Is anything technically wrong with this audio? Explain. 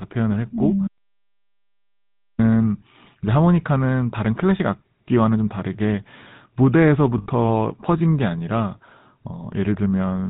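Yes, two things. The whole clip has been through the GSM full-rate codec, which fits the 13 kbps version. It models the vocal tract and drives it with sparse regular pulses, cutting everything above 4 kHz, so the speech comes out buzzy and gravelly, plainly audible throughout.

Then there are lost GSM frames from 7.18 to 7.27 s, an 80 ms gap that fits about four dropped frames. The decoder just replayed the last good frame's settings, so you hear a short rough, metallic ring instead of real speech.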